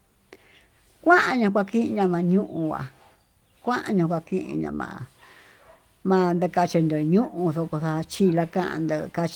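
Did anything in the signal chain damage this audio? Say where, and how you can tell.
No, nothing in the chain audibly damaged this speech. The Opus voice compression is working as intended: the band reaches up to about 20.2 kHz, which points to fullband hybrid coding at around 24 kbps, with only a light coding texture on the voice.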